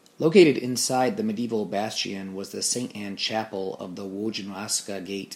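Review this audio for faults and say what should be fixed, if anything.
No faults; nothing to fix.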